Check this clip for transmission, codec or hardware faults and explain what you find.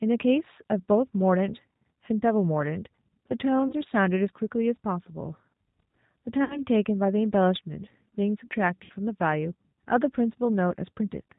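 Two things stand out: the whole recording carries G.729 codec coloration, and there are three dropouts smoothed over by the decoder's packet loss concealment.

The G.729 codec damage is plainly audible from start to finish. The speech is rebuilt from a vocal tract model, a pitch predictor and a sparse set of pulses rather than the real waveform, so it comes out slightly rough and synthetic, with nothing above 4 kHz. That sound fits an 8 kbit/s G.729A stream.

The VoIP packet loss concealed by the speech codec shows up at 3.68 to 3.73 s, 6.44 to 6.62 s and 8.84 to 8.93 s. The first covers about 20 ms of missing audio, which fits a single lost packet. The other two each cover about 60 ms, which points to three packets in a row. In each gap the decoder keeps extending its last pitch and filter while turning the gain down, so the sound smears into a buzzy tone or coloured noise that fades. 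Because each frame builds on the one before, the speech stays weak for a moment after real audio comes back.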